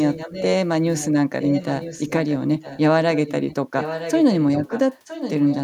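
Echo leak runs from 0 to 0.46 s, 0.96 to 1.09 s, 1.4 to 2.37 s, 2.61 to 2.81 s, 3.14 to 3.55 s and 3.79 to 5.57 s. A separate copy of the speech returns 965 ms late, roughly 10 to 20 dB quieter, likely because a far-end echo canceller let loudspeaker pickup through. Reverberation would be a smooth tail that blends into the sound, but this is a distinct, delayed repeat.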